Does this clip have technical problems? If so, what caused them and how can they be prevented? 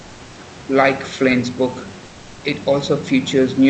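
Yes. From 2.05 to 2.41 s the background turns flat, featureless and about 2 dB quieter. This is likely comfort noise in place of the background, produced by the codec's discontinuous transmission. Turning off DTX in the sender's codec settings keeps the real background audible through pauses.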